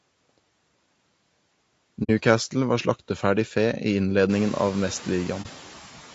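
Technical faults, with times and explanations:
Throughout: noise suppressor artifacts. The suppressor pulls steady-noise bands down by about 12 dB frame by frame, so background sinks between phrases and swells under speech.
Throughout: low-delay AAC compression. Likely AAC-ELD at 32 kbps, whose short frames resolve harmonics poorly, leaving speech plainly rough and grainy with a thin, synthetic-sounding top.
2.03 s to 2.10 s and 5.42 s to 5.46 s: AAC frame loss with muting. Lost frames were decoded as silence, and overlapping windows fade the gaps, giving a soft-edged hole of 60 ms and a brief 30 ms dip.
Room noise is present and rises by about 17 dB near 4.5 s, still sitting about 20 dB below the speech.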